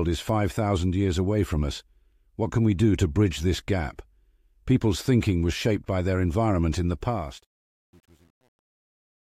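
From 7.01 s to the end at 9.30 s, the speech carries truncation distortion on a fade. The fade-out begins around 7 s. As the level drops, the gain stage keeps too few bits and adds no dither, so the waveform collapses into coarse square steps. The grit is consistent with roughly 9-bit resolution. From 7.46 s onward it is worst. The tail turns rough and buzzy.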